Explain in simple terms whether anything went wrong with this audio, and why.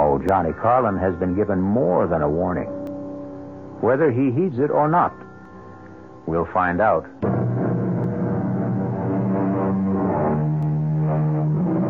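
A regular click or tick can be heard about five times, starting at 0.29 s and recurring every 2.58 s until 10.63 s. That steady rhythm points to clock drift buffer slips. The likely cause is two pieces of equipment keeping time with their own clocks, one running very slightly fast. The gap between them slowly builds up or drains, and each time it overflows or runs dry a tiny handful of samples is skipped or repeated, producing the click.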